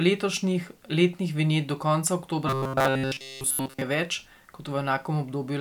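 At 2.47 s, just after "letnih vinjet do konca", robotic sound from repeated short buffers sets in. It lasts until 3.82 s. The speech becomes a rigid, metallic buzz fixed at 133 Hz. It still loosely tracks the syllables. The likely cause is audio arriving too slowly, so the playback loops a fragment of about 7.5 ms to fill the gaps. Roughly two thirds or more of the time is repeated material, and the real audio in between is lost.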